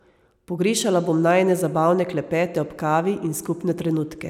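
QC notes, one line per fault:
No faults found in this speech recording.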